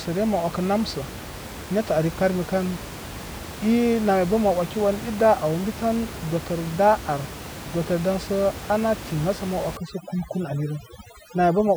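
From 9.77 s to the end of the clip, overdone noise removal takes hold. The room noise, sitting about 13 dB below the speech before this point, drops away and breaks up into twinkling specks where isolated frequency bands flicker on and off. The suppression is aggressive enough to gate out the quieter spectral components of the speech as well.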